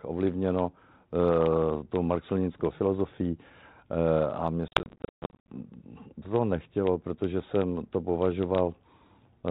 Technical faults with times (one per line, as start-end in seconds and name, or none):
4.68-5.49 packet loss on an ADPCM call